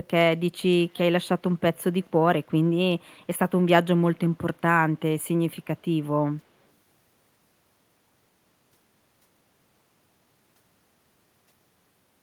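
At 0.9 to 0.99 s and again at 2.01 to 2.07 s, a faint echo leak appears: a scrap of speech repeats 253 ms later, about 30 dB and then about 35 dB down, likely where a far-end echo canceller let loudspeaker pickup through. Unlike room reverberation, it is one discrete, delayed copy rather than a smooth decaying tail.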